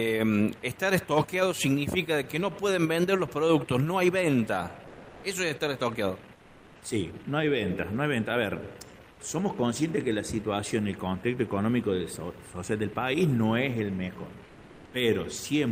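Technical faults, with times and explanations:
4.87–5.23 s and 14.45–14.93 s, comfort noise in place of the background: for about 360 ms and then about 480 ms, the quiet background, roughly 27 dB below the loudest passages, turns into a smooth, featureless hiss. The level shifts by about 4 dB the first time and about 1 dB the second. The likely cause is a sender pausing transmission during silence, as Opus discontinuous transmission does, with the receiver filling the gap with synthetic noise.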